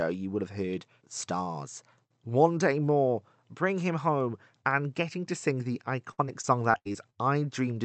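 From 6.11 to 7.15 s the speech turns choppy and robotic, broken by seven short holes, the longest 75 ms. This is repeated packet loss: packets kept going missing, and each gap was patched by stretching the preceding sound, so about 23% of that stretch is filled-in audio.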